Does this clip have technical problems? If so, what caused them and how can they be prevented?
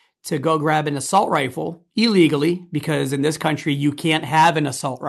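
No, this speech clip has no technical faults.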